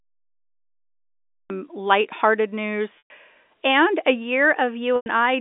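Speech heard over a telephone-band line, roughly 250 Hz to 3.6 kHz as G.711 A-law coding would give, with a cut-off start: the first 1.50 s are digital silence and the sound then enters abruptly mid-utterance with no attack, because the capture began late. Two packet losses with pitch repetition follow, at 2.98 to 3.10 s (120 ms, fitting six 20 ms packets) just before "and a", and at 4.96 to 5.06 s (100 ms). In each, the receiver repeats the last pitch period as a brief buzzy hold, fades it into silence, and cross-fades back into the speech.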